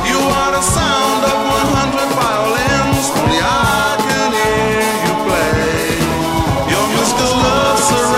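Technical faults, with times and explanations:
5.61 s to the end: doubled audio track. A second full-band copy of the sound runs about a fifth of a second behind, roughly 5 dB quieter. It starts abruptly, with no decay or room colour. This likely comes from a slower second capture path.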